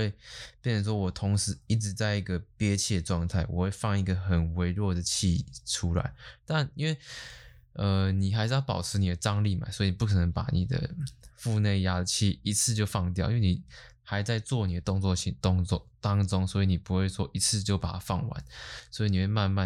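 A speech recording with nothing technically wrong to point to anywhere in it.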